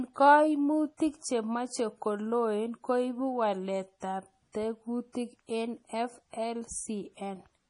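Heavy MP3 compression, likely at a bitrate as low as 32 kbps, runs through the whole clip. Short of bits, the encoder cuts everything above 10.6 kHz and discards weaker frequency components, which flicker in and out from frame to frame. The speech therefore sounds dull at the top, with a watery, swirling texture and metallic chirps on s sounds, and its consonant attacks are smeared rather than crisp.

Pre-echo appears from 5.12 to 5.15 s. A sharp onset lands late in a transform block, so the quantisation noise that belongs to the loud part is spread back over the quiet stretch just before it, about 26 ms of it. This is heard as a brief hiss leading into the attack, which then arrives softened and blurred instead of clean.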